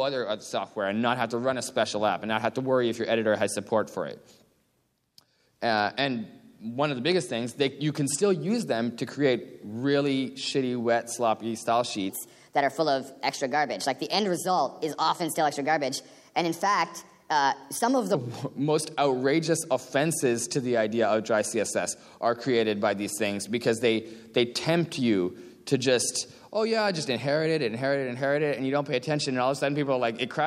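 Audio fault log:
12.09 to 18.15 s, section at the wrong speed: for about six seconds the sound runs 1.23 times faster than its surroundings. Pitch rises with it, by about four semitones. Everything in the section turns higher and more hurried, then drops back to normal at 18.15 s. Speed and pitch shift together because the samples are played out at a faster rate. The likely cause is an editor or player running this section against the wrong clock.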